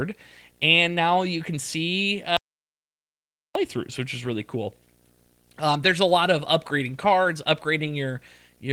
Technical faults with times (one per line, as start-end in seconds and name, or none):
0.00-8.73 video or display buzz
2.37-3.55 audio dropout to silence